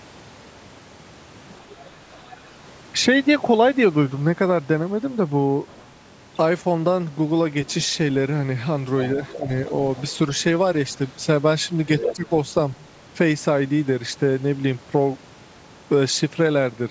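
An echo canceller that likely failed to fully remove the far end's loudspeaker playback lets the other side's voice leak through at 1.53 to 2.37 s, about 25 dB below the speech, and again at 5.67 to 5.92 s, about 30 dB down, as a faint second voice. At 9.16 to 9.48 s both sides talk at once. The canceller likely cannot separate the talker from the echo, so the speech is suppressed in double talk, dipping by about 5 dB over roughly 150 ms in total. Within that stretch, at 9.24 to 9.37 s, leakage rises to about 15 dB below the speech. A further brief scrap follows at 9.96 to 10.11 s, about 25 dB down. The worst leak runs from 11.99 to 12.86 s, only about 5 dB below the speech, so the other voice is nearly as loud as the talker. Inside it, at 12.13 to 12.25 s, the talker is pushed down by about 15 dB for roughly 100 ms, so the voice dips. Throughout, the call's microphone processing keeps the band below 8 kHz.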